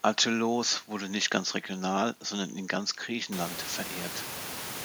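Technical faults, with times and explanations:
No technical faults are present, so there are no times or explanations to give.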